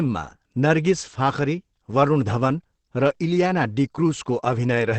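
From start to finish the speech sounds muffled and hoarse, with nothing above about 8.7 kHz, so the top end just stops. That's most likely Opus compression running in its speech-oriented SILK mode at wideband, and the heavy damage fits a bitrate down around 12 kbps. At rates that low the encoder trims the band and models the signal coarsely, which leaves that rough, boxy, gravelly texture over the whole clip.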